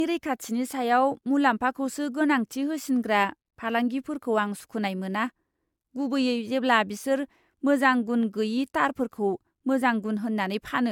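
From start to finish the speech sounds swirly and hollow, with smeared consonant attacks and nothing above 17 kHz, more degraded than one pass at the apparent AAC-LC rate near 96 kbit/s would explain. This is likely generation loss, from roughly three re-encodes on shifting frame grids.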